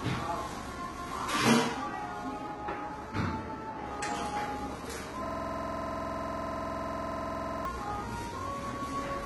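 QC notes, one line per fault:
Throughout, HE-AAC compression: the treble is bright but not true. It has a gritty, metallic edge, and nothing is present above about 11.8 kHz. The likely cause is a heavy, low-rate HE-AAC encode, which fits a bitrate near 16 kbps: the lower band is coded sparsely and the upper range is copied up from below, so its harmonics don't line up. Unlike plain low-pass filtering, the top still sounds present, only synthetic.
5.26–7.65 s, system hang loop: one 46.44 ms slice of audio repeats exactly, roughly 50 times, at about 21.5 Hz. The result is a rapid machine-gun stutter rather than a steady tone. The slice length fits a 2048-sample buffer, which points to the driver freezing while the hardware kept replaying its ring buffer. Unlike dropouts or jitter, every repeat is identical and the rhythm never drifts, until normal sound resumes at 7.65 s.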